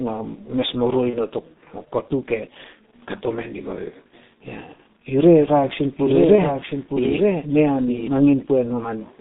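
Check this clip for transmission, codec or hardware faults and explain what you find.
Three kinds of fault are present: a heavily compressing speech codec throughout, three short packet-loss gaps patched over by that codec, and a delayed second copy of the sound in the later part.

The whole clip has been through the G.723.1 codec at 6.3 kbit/s. The line passes only about 150 Hz to 3.7 kHz, and the slow, coarse coding damages the speech heavily, leaving it muffled and hoarse with smeared consonants. On a spectrogram, everything above 3.7 kHz is empty and the harmonics look blocky.

VoIP packet loss concealed by the speech codec occurs at 1.10 to 1.19 s, 4.73 to 4.78 s and 6.35 to 6.42 s. About 30 ms, 60 ms and 30 ms of audio went missing. The decoder extended its last pitch and filter state while turning the gain down, so each gap comes out as a fading smear with weak speech just after it. 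On a waveform, these are tapering stretches with unnaturally regular periods.

A doubled audio track runs from 5.36 to 8.08 s. A second copy a few dB quieter trails the original by about one second, with no reverberant decay. It likely comes from a slower capture path feeding the same audio back in. The spectrogram shows the same patterns repeated one second later, starting and stopping abruptly.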